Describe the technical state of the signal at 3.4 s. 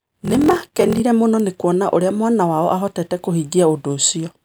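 At 3.4 s the speech signal is intact, with no audible fault at that moment.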